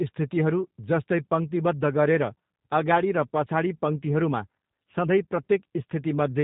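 From start to finish the speech carries plainly audible G.729 codec damage, and the character of the sound fits its 8 kbit/s mode. The codec throws away the waveform itself and rebuilds each 10 ms frame from a vocal tract filter, a pitch predictor and a few pulses, so the sound comes out rough, buzzy and faintly synthetic. On a spectrogram, energy stops sharply at 4 kHz, and harmonics look smeared and grainy rather than cleanly striated.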